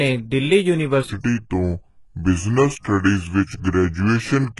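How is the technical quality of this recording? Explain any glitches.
The recording is poor, with heavy codec damage throughout, a long section running at the wrong speed, and two pre-echo events.

Throughout the clip the speech shows heavy HE-AAC compression damage, which fits a very low bitrate of around 12 kbps. Nothing is present above 11.5 kHz. The treble that remains is likely rebuilt by spectral band replication, with lower bands copied upward, so its harmonics do not match the original and sibilants sound gritty and metallic.

From 1.10 s to the end, the section runs at the wrong speed, at 0.719 times the original rate. Pitch and tempo drop together, by roughly five semitones, so the voice sounds deep and dragged. The likely cause is playback or editing against the wrong clock.

Pre-echo occurs from 1.20 to 1.24 s, spread over 39 ms, and from 2.79 to 2.84 s, over 54 ms. In each case the codec spread quantisation noise across its whole block, so noise sized for a sharp attack fills the quiet before it. 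The result is a short hiss ahead of a softened onset.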